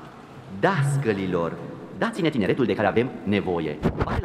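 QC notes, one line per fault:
1.94–4.25 s, time-stretched section: sound abruptly runs 1.79 times faster at unchanged pitch, rushed, likely from dropped short segments; spectrogram shows squeezed events, same harmonic spacing.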